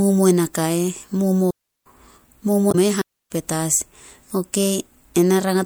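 A short speech clip with three faults. From 1.50 to 1.86 s the sound drops into a clean hole of near silence lasting about 357 ms, with no noise burst on either side. This is a digital wireless dropout: the radio link lost too much data, so the receiver muted behind a very quick fade instead of passing on garbage. The same thing recurs from 3.02 to 3.31 s, a mute of about 299 ms, again silent and clean at both edges. Between them, from 2.68 to 2.75 s, a brief blip cuts through the speech. This is damaged data in a compressed stream. Corrupted bytes left the decoder unable to parse those frames, so it lost sync and hunted for the next valid frame header.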